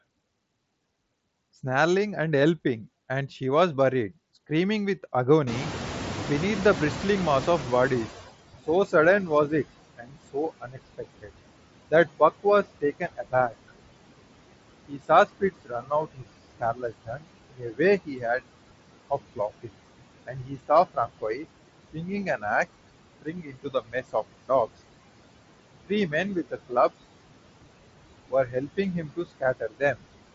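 Noise suppressor artifacts run through the whole speech clip. The background is pulled down by about 21 dB in the gaps and swells back under each phrase. On a spectrogram the noise floor pumps in step with the speech, with blotchy, speckled residue between words.

At 5.46 s the room noise jumps by about 22 dB. The noise suppressor is catching up, and its estimate lags for 2.86 s. The louder noise comes through with less reduction at first, then sinks by about 18 dB by 8.32 s. On a waveform the floor steps up sharply and tapers back down.

From 8.67 s onward the suppressor repeatedly mistakes parts of the speech for noise. These speech cuts fall at 8.67–11.31, 11.88–13.71, 14.88–18.43, 19.10–22.44, 23.22–24.50, 25.86–26.90 and 28.29–30.01 s. Word endings and soft consonants drop by about 19 to 22 dB and sound swallowed. The worst stretch is 14.88–18.43 s, with around one and a half seconds lost. 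On a spectrogram, syllable tails and fricatives vanish abruptly into dark gaps.

Above about 7.7 kHz there is nothing, which fits the mSBC Bluetooth headset path.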